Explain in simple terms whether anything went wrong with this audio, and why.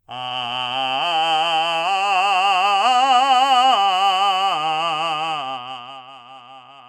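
Something did go wrong, near the end of this music. From 5.31 to 6.16 s the volume drops noticeably, but instead of gliding down it falls in tiny jumps, about forty a second. Each jump leaves a small click, and together they make a fast ticking or zipping sound on top of the music. This is zipper noise. A smooth fade makes no such ticking.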